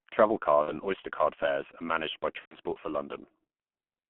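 A speech recording carried through the G.723.1 codec for its whole length. Everything sits between about 150 Hz and 3.4 kHz. The voice is heavily muffled and hoarse, and its consonants smear because the codec's coarse 30 ms frames refresh the vocal model slowly. The damage sounds consistent with a rate near 6.3 kbit/s. A simple band limit would sound dull but clean, so the rough, grainy texture is what marks this as low-rate coding rather than filtering alone. Two bursts of VoIP packet loss concealed by the speech codec interrupt it, at 0.62 to 0.72 s and at 2.39 to 2.56 s, the second right after "fares are managed by". The missing stretches, about 60 ms and 120 ms, fit two and four lost 30 ms frames. The decoder stretches the last sound into a fading buzzy tone or coloured noise, muting the longer second burst from its third lost frame, and the voice stays weak for a moment after audio resumes. 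That tail points to codec concealment.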